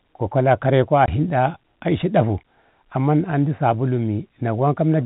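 At 1.06 to 1.08 s, packet loss filled with silence: two consecutive packets of the speech stream never arrived, so the receiver inserted silence instead. The result is a 20 ms hole, consistent with two 10 ms packets, with hard edges. Around it, the G.711 telephone band comes through intact.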